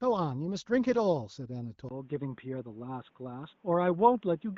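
At 1.89 s the speech turns dull and boxy, and stays that way to the end. A short gap of about 20 ms marks the change. After it, nothing sounds above 3.8 kHz. A faint new noise sits far below the speech. The level barely moves. This is most likely an input switched to a poorer device, such as a headset's call profile, with a narrower band and its own noise. The AMR wideband (HD Voice) coding adds only light damage.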